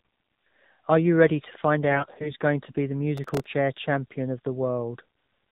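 From start to end, the speech runs through the AMR narrowband mobile codec, at a rate that points to about 7.4 kbps. Nothing above 4 kHz survives. The voice sounds thin, buzzy and synthetic. The coding damage is plainly audible throughout.

From 1.90 to 2.31 s, after "you ready to find", AMR bit errors strike. Bits in the weakly protected part of the frames arrived flipped, roughly 7 percent of them. Pulses and fine values land wrong. Pitch and level hold, but the voice turns hoarse and gargly until "going to be the".

From 3.17 to 3.46 s, just before "champion of", processor overload crackle breaks in. Buffers of about a millisecond and a half missed their deadlines, around ten of them. Each gap was filled with stale audio. The result is a gritty tearing over the voice.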